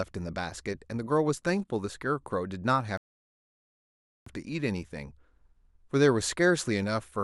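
A rebuffering stall hits this speech clip from 2.97 to 4.26 s: playback drained its downloaded audio, fell silent for about 1.3 s, then resumed exactly where it stopped.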